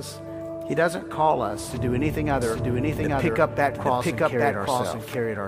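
A doubled audio track runs from 2.42 s to the end: a second, full-band copy of the audio trails the original by about 0.7 s at roughly equal level, starting abruptly with no decay or room colour, likely from a slower capture path recording it again.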